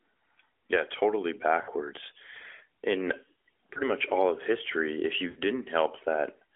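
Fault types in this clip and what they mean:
Lost AMR speech frames: radio errors wiped out some frames, so the decoder filled the gaps by repeating the last good pitch and vocal tract settings at falling gain. At 1.6 and 5.3 s you get a brief smeared, fading stretch; at 3.7 s just a quick dip.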